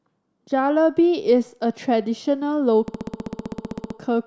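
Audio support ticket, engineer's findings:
System hang loop, 2.88–3.97 s. Speech replaced by one 64 ms fragment repeating exactly 17 times, giving a machine-gun stutter at 15.6 Hz. Probable component: host or audio driver stalled while the DMA kept replaying the ring buffer; loop length fits a 1024-sample buffer. Essentially no audio lost after recovery.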